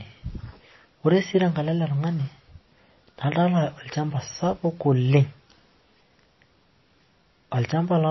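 MP3 compression damage runs through this speech recording from start to finish and is plainly audible. Nothing is present above 5.8 kHz, so the sibilants lose their edge and the speech sounds dull. The sound also has a watery, swirling quality. The likely cause is an MP3 encoder starved of bits, which fits a low bitrate of around 24 kbps. It cut the treble at a fixed point and let weak frequency components drop in and out from frame to frame.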